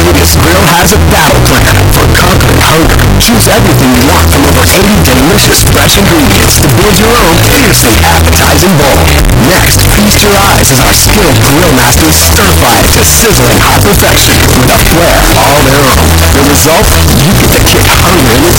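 From start to end, the audio sits at a harsh, near-square, almost fixed high level. This is float read as integer, likely 32-bit float data decoded as 32-bit integers. Unlike ordinary clipping, quiet background noise is as loud as the main sound.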